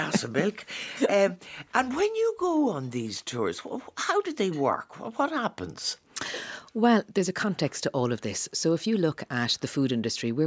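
No technical faults are audible anywhere in the audio.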